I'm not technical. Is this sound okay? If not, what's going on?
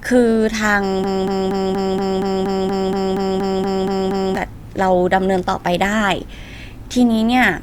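No. From 1.04 to 4.36 s the speech gets stuck in a broken-record loop: the same 0.24-second snippet plays 14 times back to back. Unlike an echo, each repeat is identical and doesn't fade. The playback likely stalled, so the speech from that stretch is lost.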